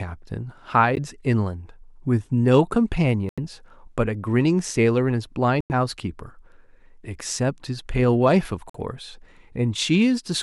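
Speech drops to silence four times: at 0.95–0.99 s for about 15 ms, 3.29–3.39 s for about 85 ms, 5.61–5.72 s for about 94 ms, and 8.70–8.76 s for about 49 ms. Each gap is a Bluetooth stall, likely from interference delaying packets until the headphones' buffer emptied. On the waveform each appears as a flat line, and on the spectrogram as a blank vertical strip with hard edges before the speech resumes.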